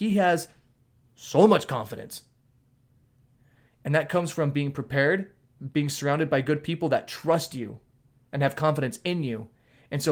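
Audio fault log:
No faults detected in the speech.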